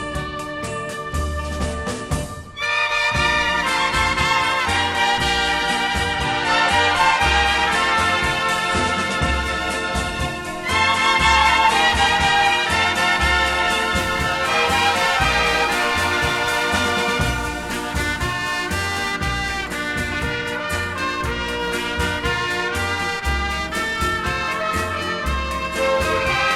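From 13.98 s to the end of the clip, periodic clock jitter sets in. Interference is shaking the converter's sampling clock at a steady rate of around 2 kHz. Each sample is taken slightly early or late in a repeating pattern. This puts sidebands about 2 kHz above and below every component of the sound. High-frequency content is hit hardest. The result is a rough, metallic edge on the audio. It disappears whenever the sound stops.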